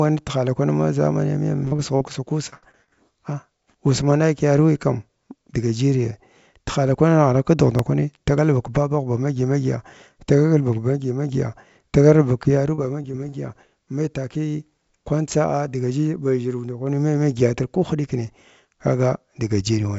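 Repeated packet loss (robotic sound) hits first from 1.65 to 2.01 s, where four gaps totalling 110 ms, none longer than 39 ms, are patched by stretching the preceding sound, so about 31% of that span is synthetic fill and the audio turns choppy. It returns from 2.49 to 2.93 s, just before "ah uss ma nayi", with five gaps totalling 180 ms. The longest is 76 ms, and concealment covers about 43% of the span, making this the most heavily concealed patch.

A repeated buffer at 7.79 s, right before "dagal vak", replays one tiny 1.45 ms block a second time when fresh audio arrived late. That length fits a 64-sample buffer. The hard join at the repeat is heard as a click or brief buzz rather than a stutter, and essentially nothing is lost.

Repeated packet loss (robotic sound) comes back from 12.44 to 13.33 s, just before "mai takiya". Five short gaps totalling 70 ms, the longest 29 ms, are concealed, covering only about 8% of the span, so the roughness is lighter and scattered. 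Throughout, the call codec leaves nothing above 8 kHz.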